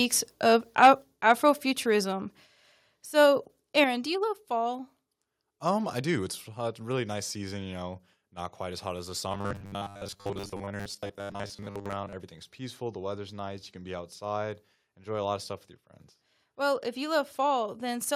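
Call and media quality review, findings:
Microphone overload, 0.82–0.88 s: harsh crackle on loud speech peaks, about 5 dB over full scale, roughly a tenth of samples flattened. Likely mic preamp gain set too high into the ADC. Waveform: squared-off tops; spectrogram: broadband smear above the harmonics. Second microphone overload, 1.29–1.32 s: milder, about 2 dB over, a few percent of samples clipped, same flat-topped peaks and high-frequency splatter.

Microphone volume stepped down at 1.02 s: level of speech and room tone drops about 4 dB at once, shortly after the first clipped burst. Likely automatic gain control in the call software cutting device input volume. Repeats at 2.04 s (about 2 dB) and 3.84 s (about 6 dB). Waveform: abrupt envelope step with no fade; spectrogram: whole band dims at a single vertical edge.

Robotic sound from repeated short buffers, 9.32–12.13 s: rigid metallic buzz at 100 Hz that loosely tracks the speech. 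Likely late audio delivery with the playout filling gaps by looping the last ~10 ms, which fits a 10 ms buffer, most of the span repeated. Spectrogram: flat 100 Hz harmonic comb; waveform: identical periodic segments.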